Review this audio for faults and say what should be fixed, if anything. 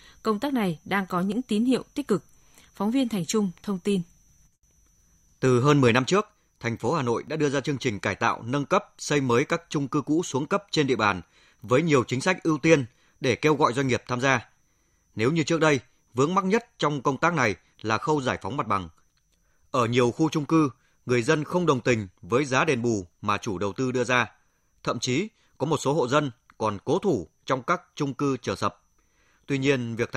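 Overlap between stream segments: roughly one-second segments carry overlapping time stamps, so the player trims real speech, causing tiny clicks or skips at 1.32 s (before "tín hiệu tích cực"), 3.29, 4.29, 5.29, 6.28 and 7.28 s. To prevent this, make each segment's time stamps continue exactly where the previous segment ended.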